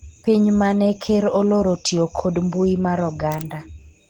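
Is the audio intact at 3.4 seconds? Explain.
No. Throughout the clip, 3.4 s included, the speech shows Opus compression, likely from an encoder squeezed into its hybrid speech mode at a rate fitting roughly 16 kbps. Band energy is kept but fine detail is synthesised, leaving the voice plainly hoarse, muffled and grainy.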